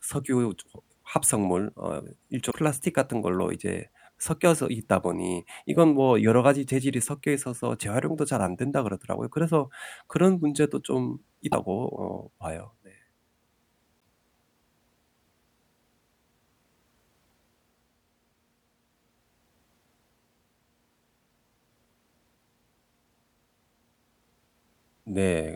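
At 2.50 to 2.54 s, 11.51 to 11.54 s and 13.99 to 14.05 s the speech skips ahead with a short corrupted stretch, likely a broken MP3 bit reservoir: frames after a cut borrow data from bytes now belonging to another frame. Unlike a clean dropout, the audio jumps forward.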